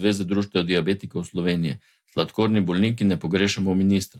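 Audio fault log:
Nothing stood out on listening to the speech at any point.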